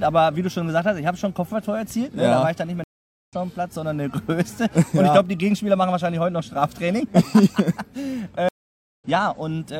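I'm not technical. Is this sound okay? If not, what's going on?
No. There are two stream reconnects, at 2.84 to 3.34 s and 8.49 to 9.04 s. The connection dropped briefly, so sound stops for about half a second and then resumes slightly further along.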